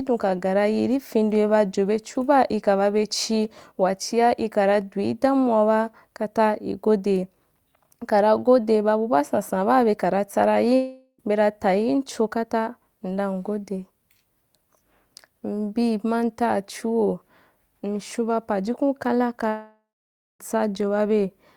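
Speech with two likely long network dropouts, after "baa bekara tsa ra" at 10.75–11.21 s and after "mshaun ba pajukun kala" at 19.49–20.42 s. Each time the last sound smears into a fading buzz, then silence, and speech resumes with a chunk missing rather than pausing naturally.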